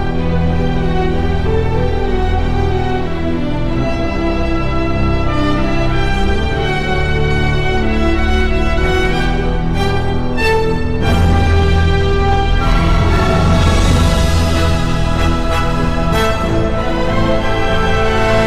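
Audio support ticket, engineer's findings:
Hard clipping, throughout the clip. A gain stage, converter or number format driven about 5 dB past its limit; loudest peaks cut flat, affecting around 3 percent of samples. Flat tops add high harmonics wherever the level peaks, so distortion follows the loud moments across the clip.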